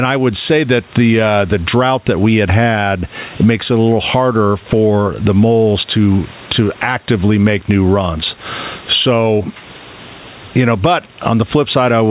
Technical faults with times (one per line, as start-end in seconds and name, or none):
0.00-12.11 gain pumping